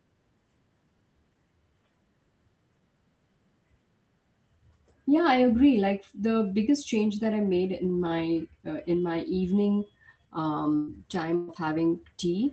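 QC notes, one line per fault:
10.75–10.90 s and 11.35–11.51 s, burst of packet loss: about 120 ms lost each time, with the receiver stretching the last sound into a fading buzz or hiss before resuming further on. On a spectrogram, frozen horizontal bands fade, then the content jumps, with no silent gap.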